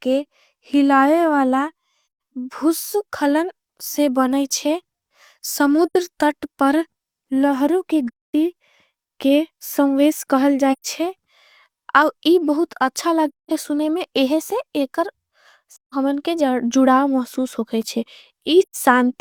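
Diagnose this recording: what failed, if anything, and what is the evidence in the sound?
The codec stage failed, with AAC frame loss with muting. The speech falls into soft-edged silences at 2.03, 5.86, 8.07 (after "तट पर लहर की"), 10.72 (after "के सम्वेश कहल"), 13.28 (before "सुने में"), 15.73 and 18.62 s. Each lasts 85 to 256 ms. The decoder zeroed the lost frames, so overlapping windows fade the sound out and back in.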